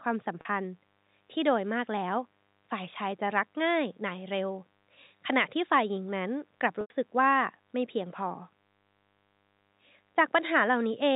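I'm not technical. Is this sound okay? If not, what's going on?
No. At 0.41 s, and again at 6.81 s, the speech briefly sticks on a held, buzzy tone, lasting about 40 ms and then 90 ms. The longer one fades into a short gap before the voice comes back. This is packet loss with pitch repetition. Small pieces of the audio went missing in transit, and the receiving end covered each gap by repeating the last bit of voice and fading it out.

From 0.71 s to the end, a faint, steady, raspy hum sits underneath everything. That is mains buzz. Electrical interference from the 50 Hz mains power supply is leaking into the audio, and its sharp overtones make it sound rough and gritty rather than like a smooth low hum.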